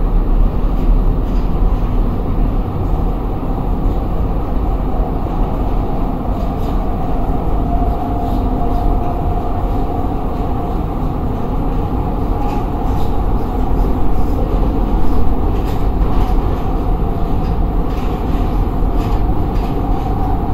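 At 0.46 s and again at 7.95 s, compressed frames are skipped. The sound jumps ahead about 0.2 s, then about 0.15 s, fitting whole 32 ms frames.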